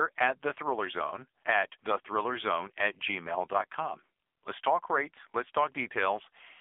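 Throughout the recording the speech sounds thin, boxed-in and buzzy, with a synthetic, robotic edge and no brightness at all. Content stops near 3.7 kHz, and the lows are cut too, leaving a telephone band of roughly 300 Hz to 3.5 kHz. This is the AMR narrowband mobile codec (AMR-NB) under heavy strain. Its pulse-driven vocal-tract model has too few bits, which fits a low mode around 6.7 kbps, so the voice is rebuilt coarsely rather than reproduced.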